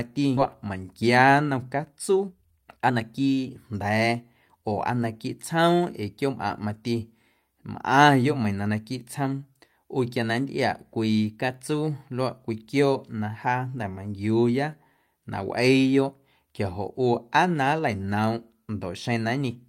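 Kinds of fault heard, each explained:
Skip ahead: Near 0.37 s the speech jumps forward with no gap, joining two points that were never adjacent. Roughly a second and a half of audio is missing, dropped in transit or discarded when the jitter buffer overflowed while later audio was already queued.
Jitter buffer speed-up: From 0.67 to 4.63 s the speech runs at about 120% speed with unchanged pitch and sounds hurried. The overfull jitter buffer trimmed short pitch-period pieces repeatedly, removing around 0.7 s in total to reduce its delay.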